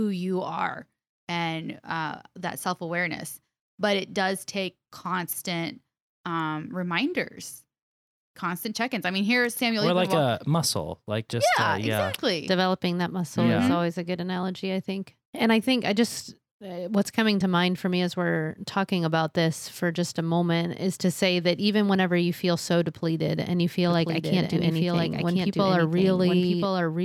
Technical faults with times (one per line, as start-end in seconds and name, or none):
23.88-27.05 doubled audio track